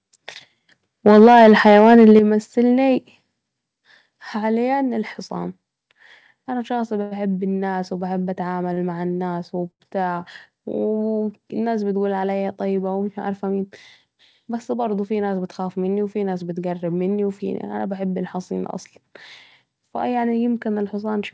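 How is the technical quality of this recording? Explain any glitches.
The recording has three kinds of fault: overload distortion with stepped level drops near the start, three brief stalls in the middle, and two short hurried passages later. It was carried over a call link band-limited at 8 kHz, which points to a wideband G.722 codec.

From 1.06 to 2.19 s the speech has a harsh, crackling edge on its loudest syllables. The likely cause is microphone overload: peaks overshoot the converter's ceiling by about 4 dB, so around 7 percent of samples are flattened. On a waveform the tops look sliced flat. A spectrogram shows broadband splatter on those peaks.

The level drops abruptly three times: by about 2 dB at 1.19 s, about 7 dB at 2.19 s, and about 4 dB at 3.21 s. Speech and background fall together. This is likely the call software stepping the microphone volume down in response to the clipping. 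A waveform shows the envelope shrinking in three clean stairs.

Short stalls from late packets occur at 7.02 to 7.13 s (93 ms), 8.73 to 8.79 s (40 ms), and 9.71 to 9.82 s (90 ms). Each time the jitter buffer ran dry, so the receiver held the last sound until the packet arrived. Nothing is lost, but a sound lingers with a slight buzz or dip. Spectrograms show frozen, smeared harmonics there.

Jitter buffer speed-ups run from 13.18 to 13.72 s, about 9% fast with about 50 ms trimmed, and from 19.88 to 20.33 s, about 7% fast with about 40 ms trimmed. Excess buffered audio was shed by cutting pitch-period slices, so the speech sounds hurried at unchanged pitch. Spectrogram harmonics stay level while syllables compress.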